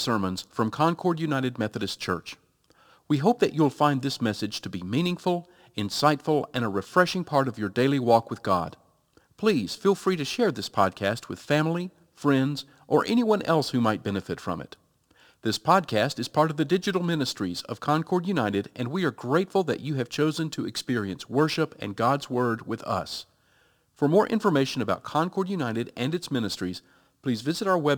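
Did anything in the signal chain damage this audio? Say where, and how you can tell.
Yes. Crude rate conversion in the sample-rate conversion stage: a gritty, inharmonic fizz about 30 dB below the speech, tracking loud and bright sounds, fits 44.1 kHz to 48 kHz conversion by unfiltered sample repetition.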